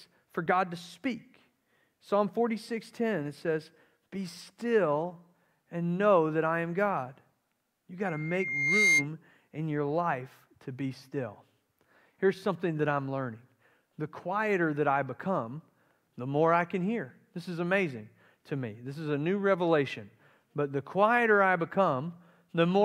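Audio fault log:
8.05–9.08 s, loudspeaker feedback squeal: a single tone near 2.1 kHz rises out of the speech, swelling over roughly three quarters of a second until it sits about 5 dB above the talker, then cuts off just before "in your life to". The microphone is picking up its own loudspeaker, and at that one frequency the round trip adds more gain than it loses, so the tone feeds itself and climbs.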